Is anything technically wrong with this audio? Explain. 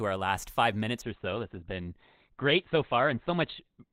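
Yes, there's an adaptive stream dropping to a lower bitrate. From about 1.02 s through to the end, the quality falls off abruptly with no gap. The sound was switched to a cheaper version of the stream when the connection slowed. Everything above 4.5 kHz disappears, so the speech turns dull and muffled, with a watery edge from the heavier coding. That character fits a step down from roughly 64 kbit/s Opus to around 12 kbit/s.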